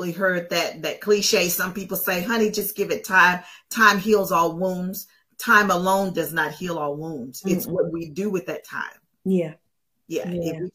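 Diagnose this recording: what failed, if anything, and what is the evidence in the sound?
Nothing failed at any stage here, so there's no fault to point to anywhere in the recording.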